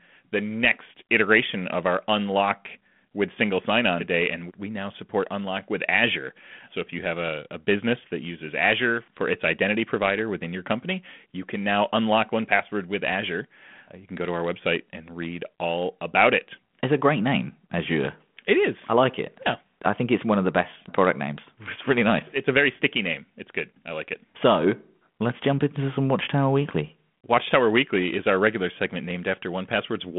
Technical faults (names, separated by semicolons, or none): none